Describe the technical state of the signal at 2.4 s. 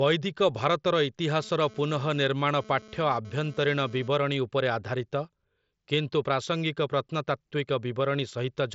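A nearby 2G phone transmitting data is being rectified by the audio circuit, so GSM phone buzz runs from 1.40 to 4.08 s: a harsh, harmonic-rich 217 Hz rasp, coming and going, about 23 dB below the speech.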